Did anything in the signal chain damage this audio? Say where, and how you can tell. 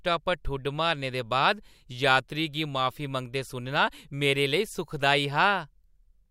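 Yes. A driver or buffer stage most likely let a single sample or so slip out of the stream, which shows up as dropped samples at 4.56 s in this speech. Skipping that value makes the waveform leap straight to a later point, a step far too brief to remove any audible sound. What you hear is one sharp click, and the spectrogram shows it as a thin vertical line running across the whole frequency range at that instant.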